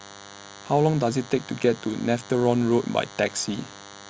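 A thin, steady buzz at 100 Hz, rich in harmonics, sits under the speech from start to finish, roughly 20 dB below it. This is DECT cordless phone buzz: a nearby handset or base station transmits a radio burst every 10 ms, which the audio circuitry rectifies into sound.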